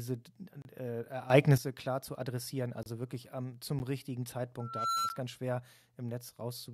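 At 0.62 s the speech cuts out for 30 ms. This is a block of digital silence: the output buffer was likely not filled in time, so zeros played instead.

From 1.3 to 1.58 s, just before "klar zu adressieren", the level of the speech and its background noise jumps by about 12 dB at once. This sudden gain jump likely comes from a gain setting applied without a ramp.

The same 30 ms silent hole returns at 2.83 to 2.86 s, between "klar zu adressieren" and "wirklich am zum richtigen". A 10 ms tick of silence follows at 3.79 s, right after "wirklich am zum".

From 4.6 to 5.22 s a 1.4 kHz tone swells over roughly a third of a second to about 5 dB above the speech. This loudspeaker feedback squeal comes from the microphone picking up its own loudspeaker, with the loop gain exceeding one at that frequency.

Inside the squeal, at 5.09 s, another 10 ms block of digital silence briefly ticks.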